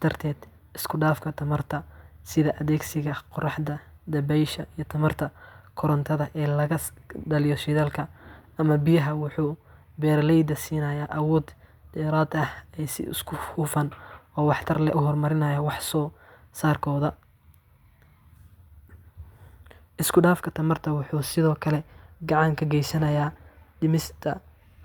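Nothing in this speech recording stood out as a technical fault on listening.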